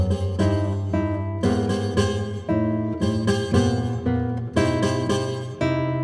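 No technical faults can be heard anywhere here.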